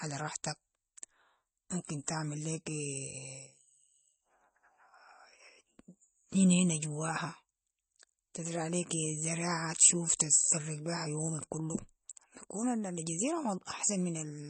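MP3 compression damage runs through the whole clip: nothing is heard above 8.3 kHz, and the speech sounds plainly watery and swirly, with smeared onsets. The likely cause is a bit-starved MP3 encoder, fitting a rate near 32 kbps, cutting treble and dropping weak frequency lines frame to frame.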